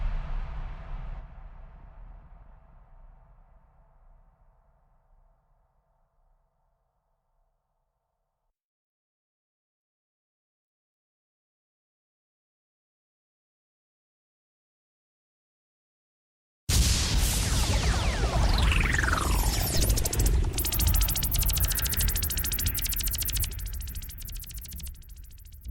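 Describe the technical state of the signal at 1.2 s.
A skip ahead occurs at 1.19 s. Roughly a second of audio is dropped, likely discarded by an overflowing jitter buffer while later audio was already queued. Playback jumps straight to that later material with no gap or fill, so the two sides butt together abruptly.

Jitter buffer speed-up follows from 1.30 s to 5.42 s. The receiver trims short pitch-period-length pieces again and again to work down excess buffered delay, removing about 0.4 s in total. The sound runs about 9% fast at unchanged pitch and feels hurried.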